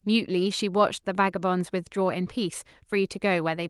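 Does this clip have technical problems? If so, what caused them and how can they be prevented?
No, no technical faults here.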